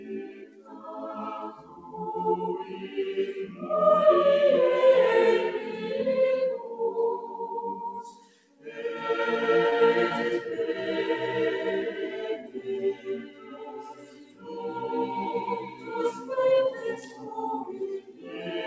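A noise suppressor applied to music or sounds runs throughout, its gain swinging by about 15 dB. It treats held tones and decaying tails as noise, so attacks pass while sustained sound sinks and pumps. Sound cut by the noise suppressor drops by about 8 to 12 dB at 0.00–0.84 s, 1.56–1.92 s, 8.07–8.75 s, 12.37–12.62 s, 12.94–14.56 s, 15.64–16.30 s and 16.97–18.44 s. Short concealed packet loss at 9.70 s leaves a brief smear or wobble: 20 ms of audio never arrived, and the decoder bridged 18 ms of it by extending the preceding sound before blending back into the real signal.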